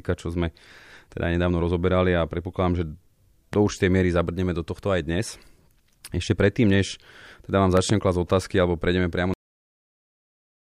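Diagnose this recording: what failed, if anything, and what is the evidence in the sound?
A voltage transient on the analogue side, likely from a plug, switch contact or static discharge, was added to the signal twice, producing loud pops that sit on top of the speech while it carries on underneath. The first is a single sharp pop from 3.53 to 3.56 s, peaking at about 10 dB above the speech. The second, from 7.77 to 7.93 s, is a pair of pops in quick succession, peaking at about 15 dB above the speech.

The recording has a cut-off end. The final buffers were never written to storage or passed to playback, so the speech stops abruptly at 9.34 s, in the middle of a sound. There is no natural decay or room tail. The audio drops straight to digital silence and stays there to the end of the file, which is what happens when capture or file writing ends before the last blocks of audio are flushed.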